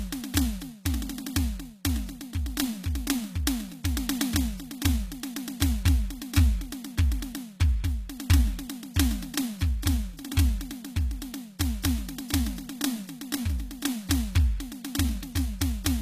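Music, with a hard ceiling on its top end throughout: nothing sits above 14.9 kHz, and the highs have the thin, smeared quality of heavy data reduction. This is likely low-bitrate audio saved at a high bitrate. An earlier lean encode, which sounds like a very low-rate AAC-family codec, removed the detail, and the later MP3 pass at a generous rate could not restore it. On a spectrogram the content stops at a flat, sharp edge with empty space above it for the whole clip.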